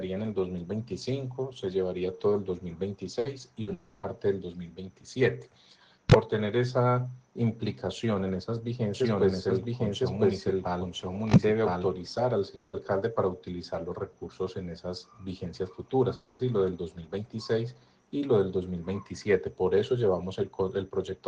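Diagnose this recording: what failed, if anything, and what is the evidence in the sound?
The network stage is dropping packets in bursts, at 3.19 s and again at 3.61 s. Each time, the last bit of sound is stretched into a short fading buzz or hiss for about 60 ms. The audio then picks up further along, with about 60 ms gone.

There are long network dropouts at 3.73 to 4.06 s, 12.55 to 12.76 s and 16.15 to 16.42 s, likely from the network. The receiver keeps extending the last sound as a fading tail for 300, 180 and 240 ms, never reaching full silence. It then resumes with that much audio skipped.

From 8.94 to 11.86 s there's a doubled audio track. A full-band copy sits roughly a second behind at about the same level, dry and with no room colour, and it switches on and off abruptly. That's likely a second, slower capture path mixed in, or two misaligned copies left in an edit.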